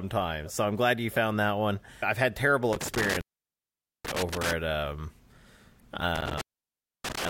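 Around 2.73 s, just after "one I've had terrible", there's an intermittent contact: a loose cable or plug opens for about 0.84 s, so the speech drops out with crackle at the edges and faint hiss underneath. The section is disturbed until about 4.53 s, picking back up at "at um". It happens again from 6.16 s to the end, with the line open for about 0.63 s, and the same crackly break.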